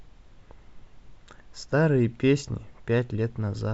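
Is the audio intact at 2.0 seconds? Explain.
Yes, the audio is intact at 2.0 seconds, with the speech continuing without any dropout, glitch or distortion, only the call codec's ordinary band limit leaving nothing above 8 kHz.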